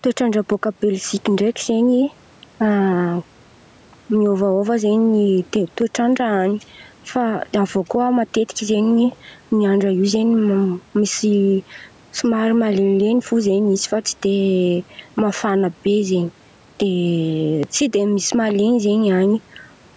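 A recording of speech in which the level is pulled down whenever the talker gets loud, throughout. Loud and soft passages sit squashed close together, with the swing being around 5 dB. This is gain pumping, likely from input gain set far too high for the microphone, so a fast limiter or compressor clamps down on every loud sound and releases in the gaps. The faint room noise sits roughly 37 dB under the speech. The call's microphone processing caps the audio at 8 kHz.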